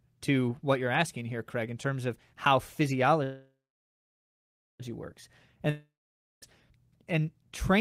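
A call audio freeze runs from 3.23 s to 4.81 s. The speech stops and the last sound trails on as a fading buzz, then settles into about 1.27 s of silence before resuming. The likely cause is packets held up in transit, so the jitter buffer ran dry. When they arrived, playback picked up exactly where it left off. Nothing is lost, but everything after is pushed about 1.56 s later.

A long network dropout follows at 5.70 s to 6.44 s. Again the last sound is stretched into a brief decaying buzz, then about 0.53 s of silence. This time, when the speech returns, it has jumped ahead: roughly 0.72 s of audio is simply gone. The likely cause is a stretch of packets that never reached the receiver, leaving it to fill the hole before skipping to the next audio it received.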